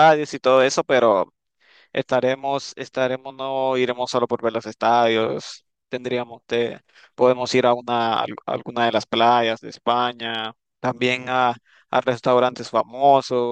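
Nothing stood out on listening to this speech recording.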